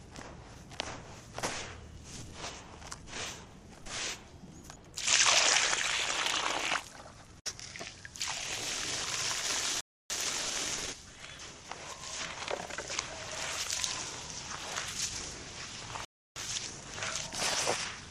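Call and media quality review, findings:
Playback stall at 9.81–10.10 s and 16.05–16.36 s: output drops to silence for about 0.29 s and 0.31 s mid-flow. Likely buffer underrun or a blocked player thread.

Time-compressed catch-up at 10.10–12.04 s and 16.36–18.02 s: audio hurried to 1.15x at normal pitch. Player trimming its backlog with small cross-faded cuts.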